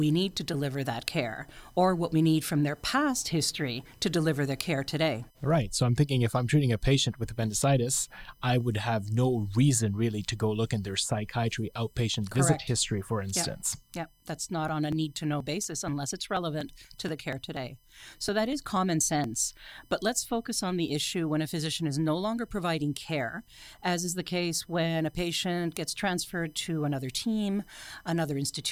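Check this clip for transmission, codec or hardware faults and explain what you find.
Two hardware faults are present in the speech: a constant USB whine and a burst of periodic USB or driver dropouts.

USB whine runs through the whole clip as a fixed 1 kHz tone, strongest at its 3 kHz harmonic, about 40 dB below the speech. The 1 ms USB frame timing leaks current into the power or ground of the audio path, producing this steady tone.

Periodic USB or driver dropouts occur from 13.72 s to 19.24 s, every 0.24 s. A blocking task on the bus or driver causes about 10 ms of audio to be skipped each time, around twenty times, heard as evenly spaced ticks during the speech.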